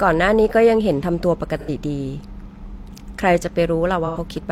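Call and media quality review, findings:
AAC frame loss with concealment, 1.59–1.69 s and 4.06–4.17 s. Brief smeared, noisy patch of about 85 ms each, consistent with two consecutive lost frames. Decoder concealment rebuilt the gap from the last good spectrum. Loss too short to fade to silence.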